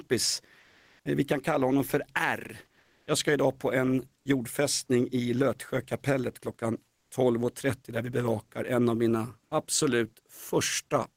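At 0.59–1.05 s, 2.79–3.07 s (just before "ska idag på en") and 6.95–7.11 s, comfort noise replaces the background: likely discontinuous transmission, with the receiver synthesising steady, featureless hiss in the pauses, about 1 to 2 dB quieter or level. Unlike a dropout or noise gate, the pauses never fall silent.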